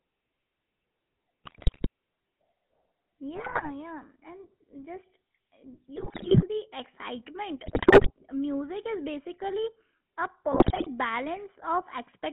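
Speech carried through the GSM full-rate codec, which rebuilds the voice from a vocal-tract model driven by sparse, regularly spaced pulses and passes only about 150 Hz to 3.4 kHz, leaving it thin, buzzy and gravelly throughout. GSM bit errors, where corrupted filter, pitch and gain values reach the decoder, bend the spectrum and throw the level around, breaking the voice into squawks, pops and gargling at 1.44–1.87 s, 3.35–3.70 s, 5.96–6.45 s just before "the excitement", 7.64–8.11 s just before "music is basically a", and 10.52–10.88 s just after it.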